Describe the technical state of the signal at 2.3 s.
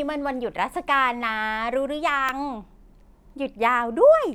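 At 2.29 s there is a block of digital silence: about 2 ms of samples drop to zero and return with no fade, producing a single brief tick in the speech.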